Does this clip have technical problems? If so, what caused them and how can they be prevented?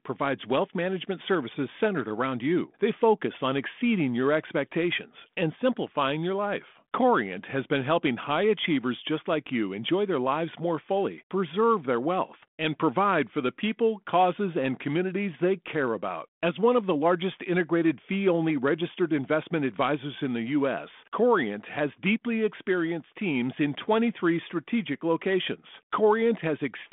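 No, nothing in this speech stood out as a technical problem on listening, so there is nothing to trace to a cause or prevent.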